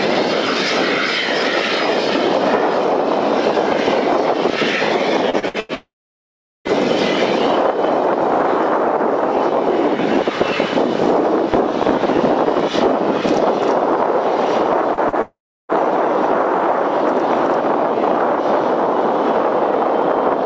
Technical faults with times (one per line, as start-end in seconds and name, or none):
5.30-5.72 repeated packet loss (robotic sound)
5.75-6.68 long network dropout
14.94-15.15 short concealed packet loss
15.21-15.72 long network dropout